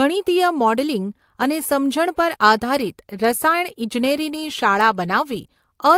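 Clock drift between sender and receiver runs through the whole clip. The sender's clock runs about 5 percent fast, so audio arrives quicker than the receiver plays it out. Its jitter buffer keeps filling, forcing the receiver to discard small slices of speech to keep up.

Repeated timing corrections run from 0.01 s to 5.94 s and play the speech at 105 percent speed. The receiver keeps trimming short pieces, always removing rather than repeating, at uneven spacing. This is heard as faint hiccups and a slightly rushed, unsteady tempo.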